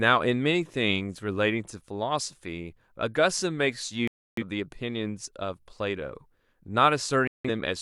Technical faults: digital broadcast dropout

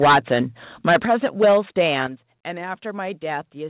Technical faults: microphone overload; microphone volume stepped down

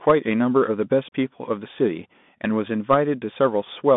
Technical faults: Bluetooth CVSD headset codec

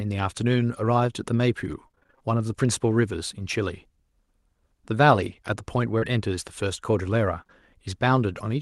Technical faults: repeated packet loss (robotic sound); scattered short gaps

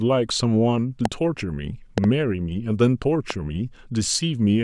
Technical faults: loud pop

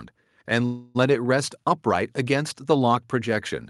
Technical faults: call audio freeze

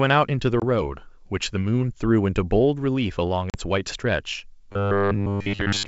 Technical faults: packet loss on an ADPCM call; robotic sound from repeated short buffers

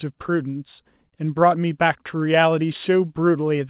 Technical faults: none

